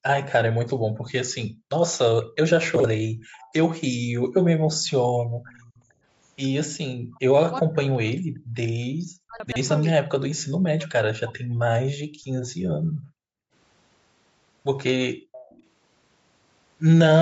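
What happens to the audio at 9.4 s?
Chunks out of order from 9.40 to 9.56 s: a 40 ms chunk arrived or was written three chunk-lengths late, so it plays after the audio that should follow it. Nothing is missing, but the order is scrambled, giving a brief jumbled moment with three hard joins.

Speech suppressed in double talk also covers this moment, from 7.08 to 11.64 s. The speech dips by up to about 40 dB for around two seconds in total. The likely cause is an echo canceller that turned the talker down while both sides were speaking.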